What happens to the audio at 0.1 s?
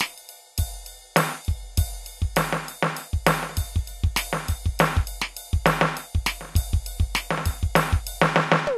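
At 0.1 s the music plays through cleanly, with no fault to be heard at that moment.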